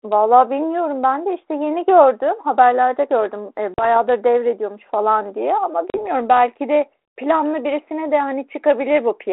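At 3.74 s and again at 5.9 s the speech drops into a hard-edged 40 ms silence, packet loss on an ADPCM call where a couple of packets vanish. Unlike a clean PCM dropout, the return is marred: the decoder's adaptive predictor and step size have lost track of the sender's, so the speech resumes slightly distorted, settling by 3.97 s and 6.03 s. The band-limited, lightly coded line fits 32 kbit/s G.726.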